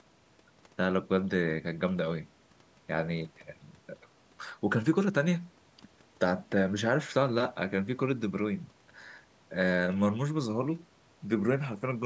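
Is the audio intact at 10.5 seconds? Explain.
Yes, the speech at 10.5 seconds is intact, with no dropout, click or other fault, only the normal bass roll-off of call microphone processing.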